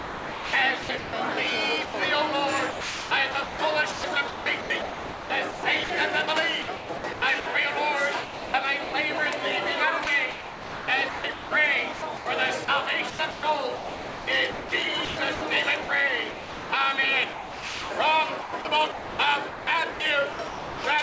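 From 0.0 to 1.13 s the sound is chopped by the voice detector, most likely because the sender keeps toggling transmission on and off. About 0.74 s of that stretch becomes comfort noise, so the audio stutters.

At 1.85 s the sound is dropped by the voice detector for 90 ms. The detector likely took it for background and stopped sending, so a short patch of steady noise sits in its place.

The chopping comes back from 2.72 to 5.90 s, 6.62 to 7.46 s, 8.24 to 8.93 s and 10.04 to 16.70 s. The 10.04 to 16.70 s run is the worst, with about 2.7 s filled in.

From 17.33 to 17.90 s there is another drop, 570 ms of sound lost to steady noise.

Chopping returns from 18.41 to 20.84 s. All of it rides over a G.722 call path with nothing above 8 kHz.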